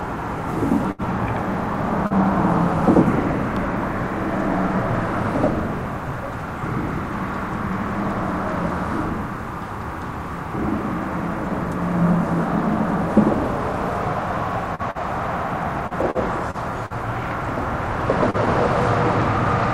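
At 0.91 to 1.02 s a short stall from a late packet holds the sound for about 72 ms. The jitter buffer ran dry and the receiver stretched the last sound until the packet arrived, then resumed at the same point. Nothing is lost; the sound is simply held too long, with a slight buzz or dip. A second stall at 14.91 to 14.98 s holds for about 41 ms.

Short concealed packet loss occurs at 2.07 to 2.13 s, 14.75 to 14.82 s and 18.30 to 18.37 s. Each time about 40 ms of audio never arrived, and the gap was filled by continuing the preceding sound before blending back. Unlike the stalls, audio is actually missing here, so each one is a brief smear or wobble rather than a held sound.

From 15.87 to 16.93 s, repeated packet loss produces choppy, robotic sound. There are four gaps, the longest about 42 ms, and concealment covers about 14% of the span. The patches come close together, so the sound turns broken rather than showing one isolated smear.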